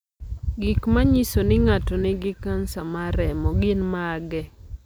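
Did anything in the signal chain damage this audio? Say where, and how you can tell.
Yes. There is a single sharp click in the speech at 2.28 s. It shows as a thin vertical line across the spectrum. This is dropped samples. A couple of samples vanished, so the waveform jumps abruptly. The likely stage is a driver or buffer hand-off.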